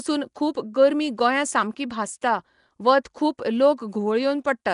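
Throughout, likely Nellymoser compression: its coarse fixed bit budget fills weak bands with noise, so the speech sounds hissy, smeared and underwater, with nothing above 10.6 kHz.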